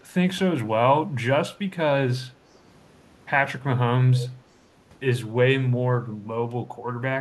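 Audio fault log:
4.16–4.29 s, echo leak: an echo canceller on a loudspeaker end likely failed to strip its own playback from its microphone, so a short scrap of the speech comes back about 312 ms late, roughly 15 dB quieter, heard as a faint delayed repeat.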